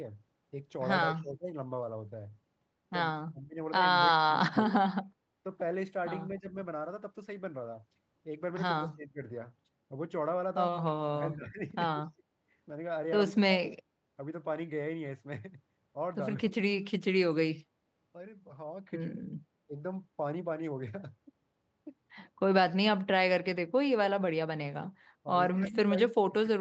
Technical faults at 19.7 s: speech suppressed in double talk

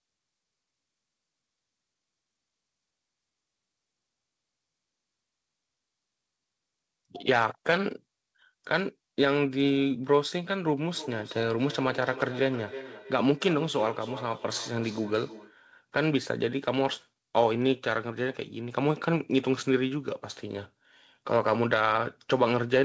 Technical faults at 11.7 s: feedback echo between two devices

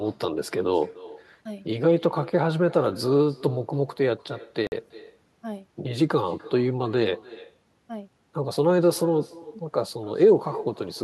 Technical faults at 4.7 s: echo with no canceller; Bluetooth stall

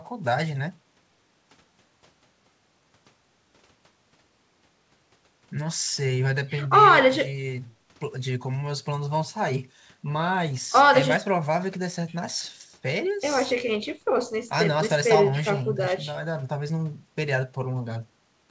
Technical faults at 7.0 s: none

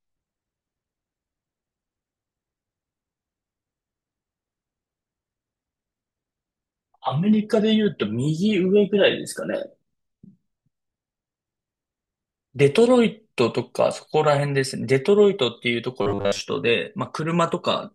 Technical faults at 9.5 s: none

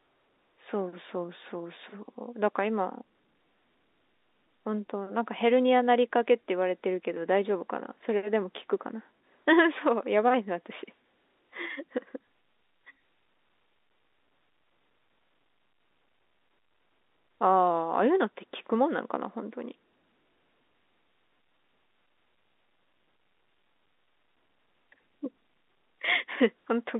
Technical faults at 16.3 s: none

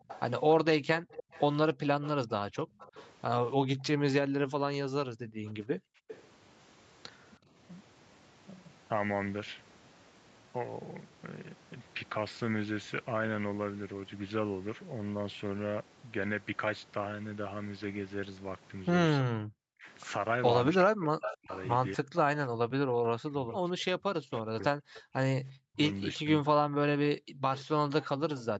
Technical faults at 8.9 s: none

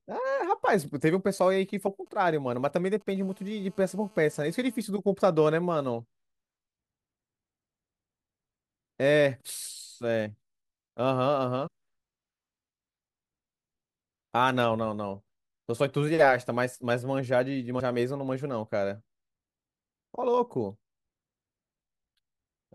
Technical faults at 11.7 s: compressed frames skipped

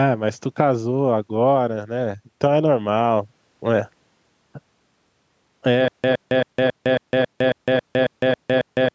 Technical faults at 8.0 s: stutter with silent gaps

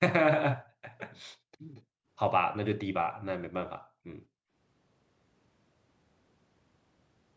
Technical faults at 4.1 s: none

